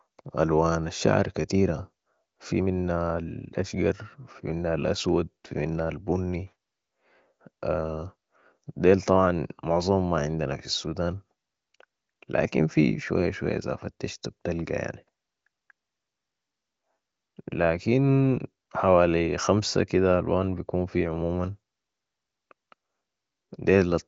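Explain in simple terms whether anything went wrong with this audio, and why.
Nothing went wrong: the speech is carried by the AMR wideband (HD Voice) phone codec doing its normal job, which is why the sound holds nothing above about 7.4 kHz.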